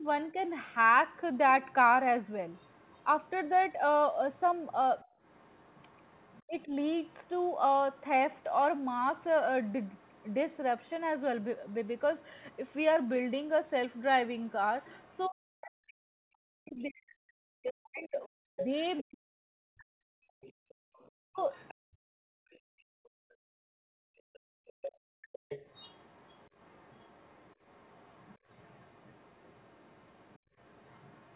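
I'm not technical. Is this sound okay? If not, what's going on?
No. Three things go wrong, all from the echo control in a call.

First, speech suppressed in double talk. The speaker's voice gets turned down at the very start, up to 0.39 seconds, and again from 6.47 to 6.75 seconds. From 15.27 to 21.49 seconds it nearly vanishes. This is likely because both people talked at once and the call software muted both.

Second, the other side's voice leaking through. From 0.6 seconds to the end, a faint second voice sits underneath. The loudspeaker played the other person, and the microphone picked some of it up. The software likely failed to remove it all.

Third, background gated by the echo canceller. The room sound suddenly drops away and comes back. This happens briefly at 5.05 to 5.19 seconds, for several seconds from 20.28 to 25.42 seconds, and briefly at 30.39 to 30.56 seconds.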